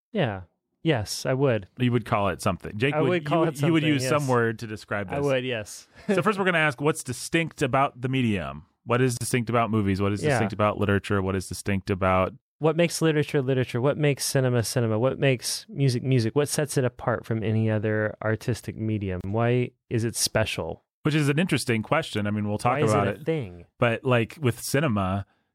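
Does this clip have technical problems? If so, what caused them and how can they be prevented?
Yes. Pieces encoded separately were joined untrimmed, keeping encoder delay and end padding, so a gap at a join of encoded pieces interrupts the speech: about 37 ms at 9.17 s, just before "distinct about movies", and 31 ms at 19.21 s, just after "from any other artistic", spaced 10 s apart. Trimming each piece's start delay and final-frame padding before joining, or encoding the recording in one pass, prevents this.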